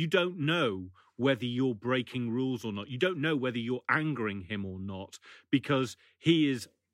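Listening to this short speech recording, nothing stood out as a technical problem.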